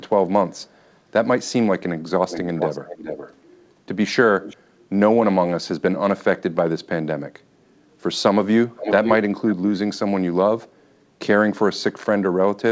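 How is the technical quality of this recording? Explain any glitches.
The recording has clear technical problems: repeated echo, one suppressed stretch of speech, and a brief dip in the room sound. The audio is band-limited to 8 kHz, as expected from a wideband call codec such as G.722.

Echo leak occurs at 0.56–0.93 s, 2.29–3.35 s, 4.43–4.56 s and 8.76–9.15 s. A delayed copy of the speech follows the original by 310 ms in the first instance, 419 ms in the second and third, and 503 ms in the last. In the first it is barely audible. It is fairly strong at 2.29 s, moderate at 4.43 s, and nearly as loud as the direct speech at 8.76 s. The likely cause is a loudspeaker on the far end whose echo canceller let some of its own playback back into the microphone.

Speech suppressed in double talk occurs from 6.45 to 6.82 s. For roughly 0.4 s the talker's level falls sharply, at its deepest to near silence, so the speech breaks up or vanishes. 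The likely mechanism is that both sides were talking at once and the echo canceller treated the local talker as echo, attenuating it along with the loudspeaker signal.

Background gated by the echo canceller occurs at 10.68–10.79 s. The room sound drops by about 10 dB for roughly a tenth of a second, then returns. The canceller clamped the microphone while the loudspeaker was active and released it moments later, which leaves a short hole in the ambience.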